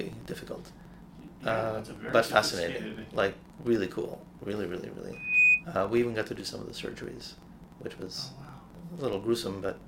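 A steady buzz near 23.4 Hz runs from the start, rising and falling with the level: a filter restarted on every block, which fits 2048-sample blocks each beginning from silence. From 5.13 to 5.64 s, a 2.5 kHz tone swells over roughly a third of a second into a squeal around 10 dB above the sound, a loudspeaker feedback squeal.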